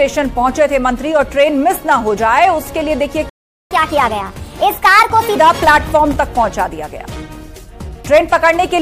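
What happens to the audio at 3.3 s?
A playback stall runs from 3.29 to 3.71 s: the output drops to silence mid-flow for about 0.41 s, likely because the player ran short of buffered data or its audio thread was briefly blocked, before the sound picks up again.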